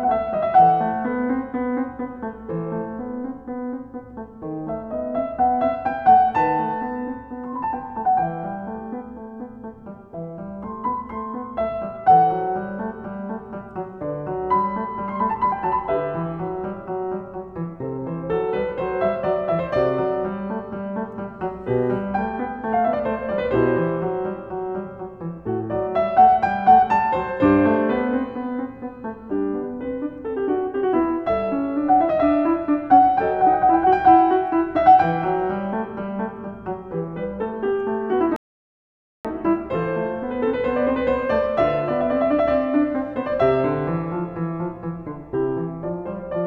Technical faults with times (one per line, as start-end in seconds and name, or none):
38.36-39.25 rebuffering stall